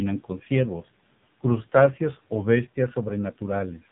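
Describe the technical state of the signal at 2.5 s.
At 2.5 s the speech is running through the AMR narrowband mobile codec, as it does for the whole clip. Nothing above 3.8 kHz survives, so the sound is muffled and telephone-like. The codec rebuilds speech from a vocal tract model excited by a few pulses per subframe. Here the damage is heavy. The voice sounds buzzy and synthetic, which points to a low mode near 6 kbps.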